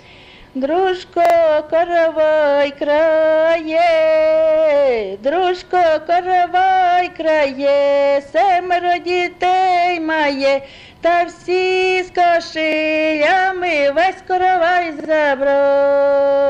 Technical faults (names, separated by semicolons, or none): repeated buffer